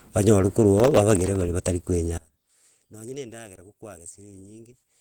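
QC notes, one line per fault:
Throughout, Opus compression: grainy, hoarse, rough texture, likely from low-rate hybrid coding near 16 kbps; spectrogram shows noisy, smeared bands reaching about 20.2 kHz.
0.78–1.44 s, processor overload crackle: roughly forty tiny buffers, each about 0.7 ms, miss their deadlines and drop to silence, giving gritty tearing; waveform shows dense hard-edged gaps.
2.18–5.01 s, one channel inverted: in mono the centred speech largely cancels, falling about 24 dB to a faint residue, likely from reversed polarity.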